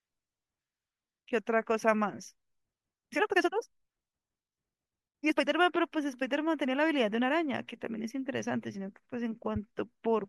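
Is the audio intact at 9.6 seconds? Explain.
No. At about 9.56 s, just before that point, there is a corrupt frame decoded: bits in roughly two compressed frames were damaged and decoded anyway, so misread gains placed energy at wrong frequencies, producing a brief, fairly quiet spurious chirp, blip or burst of noise peaking around -35 dBFS.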